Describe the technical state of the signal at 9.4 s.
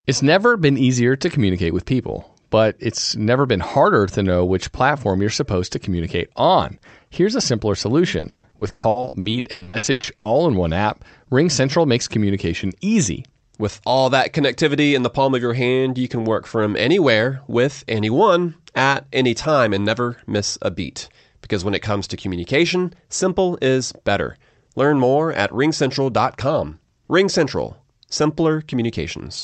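At 9.4 s you're inside repeated packet loss (robotic sound), 8.19 to 10.27 s after "a simpler": about half the stretch is lost audio patched by stretching the last sound, so it's choppy and robotic.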